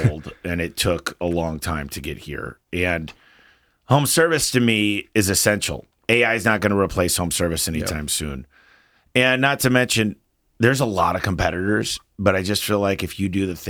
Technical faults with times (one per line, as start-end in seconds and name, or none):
none